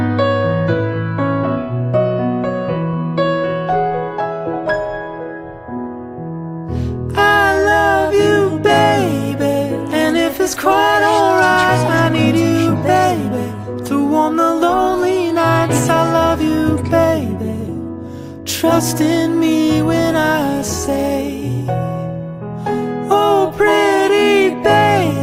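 No technical fault can be heard at any point in this audio.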